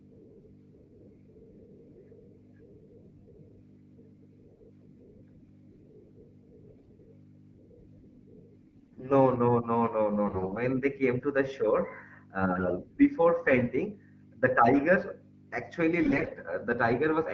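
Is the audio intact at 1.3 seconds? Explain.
Yes, the speech at 1.3 seconds is intact, with no fault at that moment.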